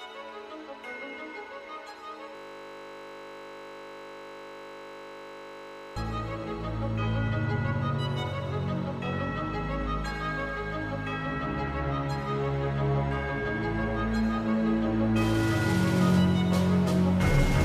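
From 2.35 to 5.96 s the audio collapses into a steady 50 Hz buzz, a system hang loop: playback froze while the hardware kept recycling one 20 ms stretch of its ring buffer, repeating it well over a hundred times, which fits a 20 ms buffer.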